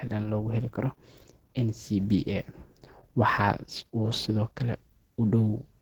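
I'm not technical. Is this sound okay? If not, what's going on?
No. From start to finish, the speech has a muffled, hoarse quality, as if the voice were being pushed through a thin layer of fuzz. It's plainly noticeable, though the sound still reaches up into the high treble. This is most likely Opus compression at a very low data rate, where the encoder falls back on a mode built for voice and fills in detail with approximation and noise.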